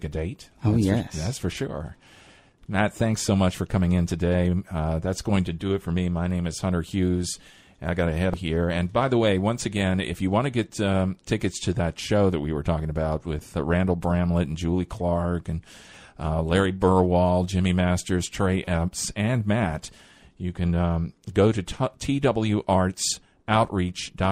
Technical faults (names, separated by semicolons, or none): damaged data in a compressed stream